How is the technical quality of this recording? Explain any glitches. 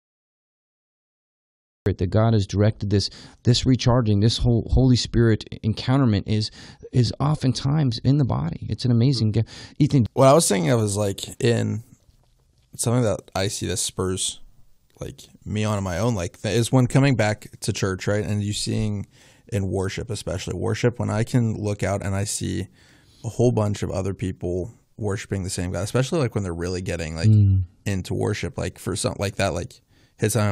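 The recording has one technical fault, at its start.

Cut-off start: from 0.00 s to 1.86 s there is only digital silence, and at 1.86 s the speech comes in abruptly, already in the middle of a sound. Capture or streaming began late, so the opening of that sound was never recorded and the audio jumps straight from nothing to full level. There is no natural attack or fade-in, and the entry sounds chopped rather than spoken.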